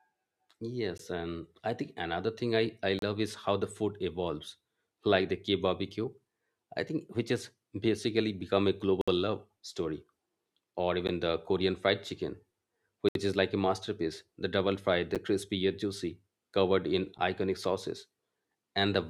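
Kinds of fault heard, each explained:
Gap between stream segments: consecutive segments don't line up in time, so silence fills each join, cutting the speech seven times at two-second spacing for 8 to 67 ms; the waveform drops abruptly to a flat line, and the spectrogram shows narrow, hard-edged blank columns.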